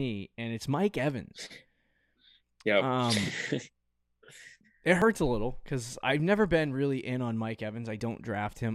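Speech with audio missing between chunks: at 5.02 s, just before "a little because I've", and at 8.00 s, a tiny slice of roughly 20 ms vanishes. The 3-second spacing likely reflects 3.0 s processing chunks. The waveform jumps without any silent gap, and the spectrogram shows a sharp vertical seam.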